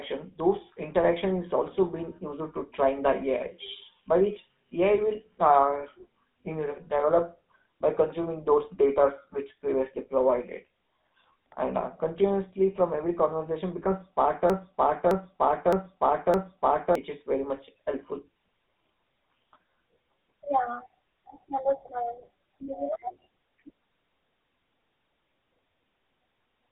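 Speech throughout has a buzzy, gravelly roughness, and its bandwidth is boxed into a narrow telephone band of roughly 200 Hz to 3.7 kHz, with nothing at all above 3.8 kHz. This is the GSM full-rate codec, with plainly audible codec damage. That character fits GSM full rate at 13 kbps, which models the vocal tract and drives it with a coarse, regularly spaced pulse excitation, so fine detail turns to grit. From 14.50 to 16.95 s, right after "from every conversation becomes", a 0.61 s fragment repeats exactly, back to back, four times before "is very much helpful" resumes. This broken-record loop means the speech that belonged in that stretch never arrives. The likely cause is a stalled player, encoder or stream that kept resending the last fragment it held.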